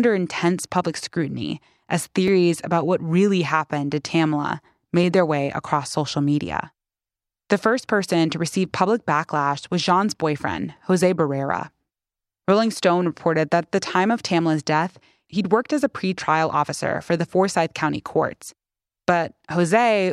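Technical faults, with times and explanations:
2.28 s and 5.03 s: repeated buffer. New audio arrived late, so the device replayed its last 5.8 ms piece once. The piece is this short, consistent with a 256-sample buffer, so each hard join is heard as a brief click rather than a stutter. About 5 ms of speech is lost each time.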